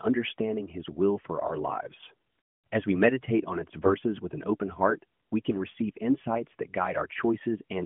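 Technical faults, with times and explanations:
1.46–1.51 s, AMR bit errors: after "will for", the sound turns briefly scratchy and gargly, keeping its rough pitch and level. Flipped low-priority bits misplace excitation pulses and skew gain and spectrum, which fits two damaged 20 ms frames. Spectrogram: harmonics smear into ragged noise. Waveform: cycles turn jagged.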